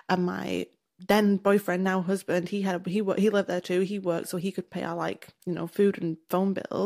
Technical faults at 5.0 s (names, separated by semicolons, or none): none